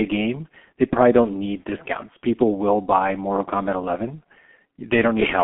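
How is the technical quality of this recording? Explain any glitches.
The technical quality is poor. One fault runs through the whole clip: the speech passes through a G.723.1 codec. The sound is confined to a telephone band of roughly 200 Hz to 3.4 kHz, with nothing above 3.7 kHz. The codec packs speech into 30 ms frames and rebuilds it from a slowly updated voice model. The heavy damage fits a rate near 6.3 kbit/s. Speech sounds muffled and hoarse. Consonants are smeared.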